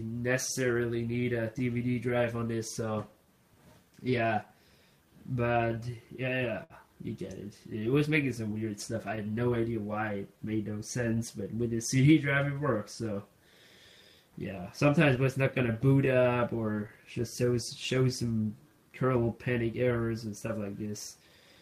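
Clock drift between sender and receiver runs through the whole recording. The sender's clock is roughly 5 percent slow, so the receiver's jitter buffer keeps draining, and the playback never quite settles into a steady pace. Repeated timing corrections from 0.06 to 21.3 s follow from that drift. The receiver keeps repeating short slivers to cover the shortfall, playing at about 96 percent speed and adding roughly a second overall, heard, if at all, as slight, unevenly spaced hiccups or an unsteady tempo. A short stall from a late packet sits at 6.64 to 6.73 s. The buffer ran empty, so the last sound was stretched for 62 ms until the packet arrived, and nothing was lost, just a brief held sound with a slight buzz or dip. Scattered short gaps appear between 15.16 and 18.30 s, about seven of them, the longest around 15 ms. Each was patched by continuing the preceding sound, totalling about 70 ms, leaving brief ticks and smears.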